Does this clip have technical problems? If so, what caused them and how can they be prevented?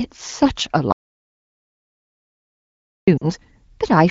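Yes. There is an audio dropout to silence from 0.92 s to 3.07 s, lasting about 2.15 s. The speech cuts off mid-flow and the gap is silent, with no room tone at all. That points to the input being lost while the recorder kept writing silence. A disconnected device, a failed link or an accidental mute is the likely cause. Anything spoken in that stretch is gone. To prevent it, secure cables and links and monitor input levels during recording.

There are also lost AMR speech frames from 3.18 s to 3.25 s, about 40 ms long. That fits two 20 ms frames failing their check. The decoder filled the hole by repeating the last good pitch and vocal tract settings at falling gain. The result is a short smeared dip, and the speech resumes weak for a moment. The call runs on AMR wideband (HD Voice) at 15.85 kbit/s, which sounds clear around this glitch. To prevent it, improve radio coverage so fewer frames arrive corrupted.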